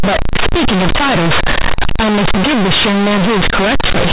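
From start to finish the speech shows companded audio read as linear: mu-law bytes are being played as plain 8-bit samples without expansion. Because the logarithmic coding is never undone, every sign change swings the output across roughly half its range, so quiet passages come out as large as loud ones. The result is harsh, buzzy distortion at high level, with heavy noise filling the pauses, all within the telephone band that stops at 4 kHz.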